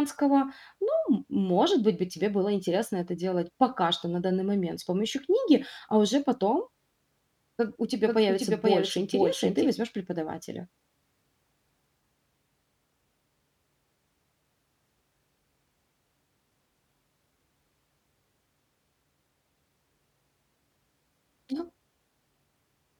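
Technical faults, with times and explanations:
8.07–9.69 s, doubled audio track: right after "у тебя" the speech is joined by a clean second copy trailing about half a second behind and roughly 5 dB quieter. It cuts in and out abruptly, with no decay or room colour, likely from a slower second capture path mixed in.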